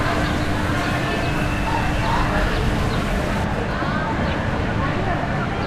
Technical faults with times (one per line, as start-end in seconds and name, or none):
3.44-5.66 de-emphasis applied wrongly